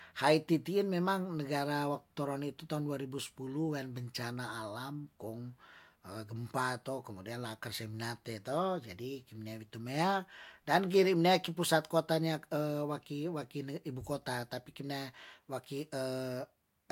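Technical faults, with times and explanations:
Nothing stood out as a technical problem on listening to this speech recording.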